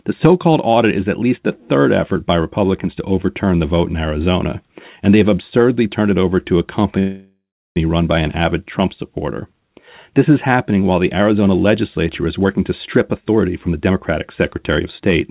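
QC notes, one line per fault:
6.99–7.77 s, call audio freeze: after "it over to a", the last sound drones on as a fading buzz, then about 0.33 s of silence, likely from delayed packets emptying the jitter buffer. Speech resumes intact at "run by an avid". On a spectrogram, smeared static harmonics fade to a blank gap.
12.39–13.95 s and 14.69–15.22 s, jitter buffer speed-up: after "legislature is", speech is hurried at 117%, then 109%, at the same pitch, as pitch periods are trimmed out. The waveform shows shortened syllables with harmonic spacing unchanged, all within the 4 kHz call band.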